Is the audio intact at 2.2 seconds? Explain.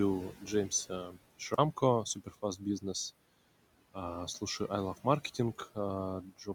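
No. From 2.05 to 2.62 s the noise suppressor cuts speech. It mistakes soft parts of the speech for background noise and turns them down, by about 15 dB at the deepest. Around a fifth of a second of sound in that span comes out swallowed and faint.

Noise suppressor artifacts also run through the whole clip, including this moment. The suppressor lowers bands it judges to be steady noise by about 18 dB. The room noise sinks between the words and rises under them.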